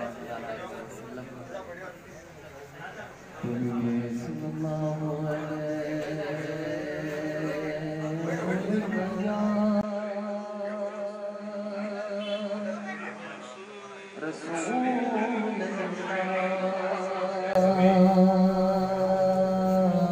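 An input switched to a poorer device from 9.81 s to 17.55 s: after a 20 ms silence the audio turns duller, nothing above 10.8 kHz gets through, the level drops by roughly 10 dB, and a new noise floor appears about 30 dB below the signal. The likely cause is the system handing capture to a different, narrower-band microphone or headset profile with its own tone and noise, before switching back at 17.55 s.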